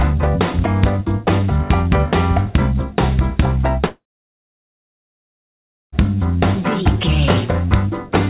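From 3.86 to 5.95 s the sound cuts out, likely a long network dropout: a brief fading buzz, then silence, a flat waveform and a blank spectrogram.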